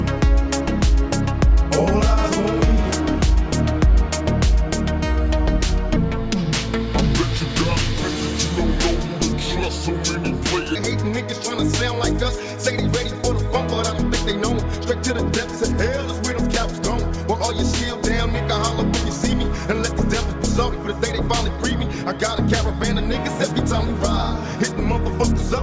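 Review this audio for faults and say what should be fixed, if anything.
From 5.96 s to 10.75 s the audio has a wrong sample rate fault: it runs slow and drops in pitch together, at about 0.73 times normal speed and roughly 5.5 semitones flat. Speed and pitch shifting by the same ratio means the samples are being clocked out more slowly than they were captured, with no resampling. That ratio fits material recorded at 22 kHz being played back at 16 kHz. To prevent it, check the declared rate of every segment against the output rate and resample on any mismatch before playback.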